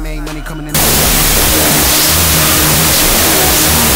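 From 0.75 s to the end, the sound collapses into loud, harsh noise with a slowed, octave-low trace of the original underneath. This is a wrong sample width fault: it fits 32-bit float samples read as 16-bit integers, splitting each value into two and halving playback speed.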